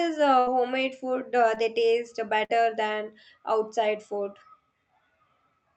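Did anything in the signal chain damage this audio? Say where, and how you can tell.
Yes. The network stage caused two bursts of packet loss, at 0.39 to 0.49 s and 2.44 to 2.55 s. The decoder filled each gap with the last sound (about 70 and 50 ms), held and fading, then resumed with 80 and 60 ms missing. The audible fade sets these apart from brief concealment.

A short concealed packet loss at 1.55 to 1.58 s also came from the network. About 20 ms never arrived, and the decoder bridged it by continuing the preceding sound before blending back. It comes through as a quick smear, not a silent dropout or sharp click.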